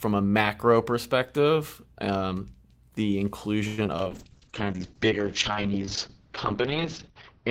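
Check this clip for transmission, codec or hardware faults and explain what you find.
Two transmission faults are present in this speech clip.

From 3.67 to 4.07 s, just after "macro perspective um the", repeated packet loss (robotic sound): four gaps, longest about 103 ms, patched by stretching prior audio, so it sounds choppy, with smeared, repeating spectrogram frames.

From 4.11 s to the end, a call bitrate drop from 32 to 7 kbps cuts the band from 20 kHz to 6 kHz, giving muffled, watery speech and a flat spectrogram ceiling.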